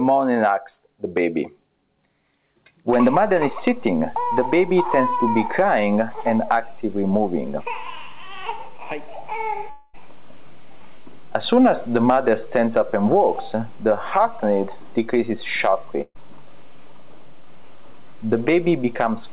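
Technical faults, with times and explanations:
9.70 to 9.95 s, long network dropout: the audio stream most likely stopped arriving for about a quarter of a second, and the receiver had nothing real to play. It filled roughly 234 ms by extending the last sound, so a smeared buzz or hiss stands in for about 240 ms of lost audio. It never falls to silence before the real signal returns, picking up further on with that stretch gone.
16.01 to 16.17 s, burst of packet loss: a short run of packets failed to arrive in time, leaving about 140 ms of audio missing. The receiver concealed the first 133 ms or so by continuing the previous sound and turning it down as the gap lengthened, so it fades as a held buzz or hiss. It then drops to about 50 ms of near silence before the audio resumes past the missing part, within the G.711 call band that stops at 4 kHz.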